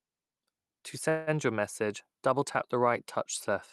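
At 1.09 s packets were likely held up in transit and the jitter buffer ran dry, causing a call audio freeze. The receiver stretched the last sound into a fading buzz or hiss until 1.30 s. The speech then resumed where it stopped, about 176 ms late, with nothing lost.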